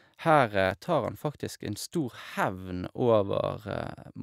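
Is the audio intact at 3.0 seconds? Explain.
Yes, at 3.0 seconds the speech runs through cleanly, with no dropout, click, distortion or other audible fault at that moment.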